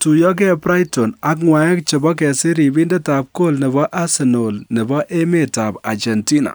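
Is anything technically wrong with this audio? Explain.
No, the speech signal shows no technical faults that a listener would pick up anywhere in the recording.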